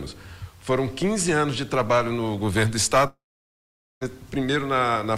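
From 3.07 to 4.03 s the sound trails into a brief fading buzz, then about 0.82 s of silence, likely a long network dropout; unlike a brief glitch, it resumes with material lost.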